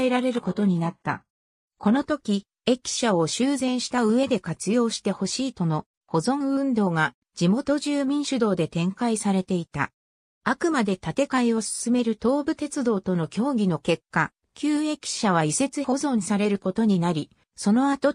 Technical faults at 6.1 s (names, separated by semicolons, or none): none